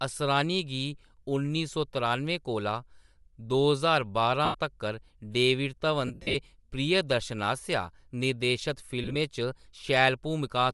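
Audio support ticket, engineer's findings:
Breathy, grainy edge on the speech throughout, upper band thin and hissy. Likely Bluetooth LC3 compression: the transform codec zeroes much of the upper spectrum and refills it with noise. The damage is plainly audible, which fits a 48 kbps stream with 7.5 ms frames. Spectrogram: smeared, speckled texture above the solid low bands in place of clean harmonics, with blocky time structure at the frame rate.

Lost LE Audio frames at 4.45–4.55 s (about 90 ms missing), 6.07–6.35 s (about 187.5 ms missing, scattered over 270 ms, longest gap roughly 70 ms) and 9.03–9.16 s (about 75 ms missing, scattered over 120 ms, short gaps around 20 ms). LC3 concealment repeats the last spectrum with randomised signs, so speech turns into noisy smear and fades on longer runs. Spectrogram: harmonics replaced by a uniform noise wash. Waveform: envelope sags during the gaps.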